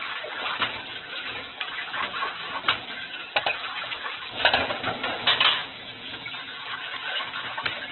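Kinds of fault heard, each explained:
Opus compression: Nothing is heard above 4.1 kHz, so this sound is narrowband and dull throughout. Tones turn grainy, rough and noisy rather than swirling. This heavy damage likely comes from Opus in its music mode, at a very low bitrate near 8 kbps.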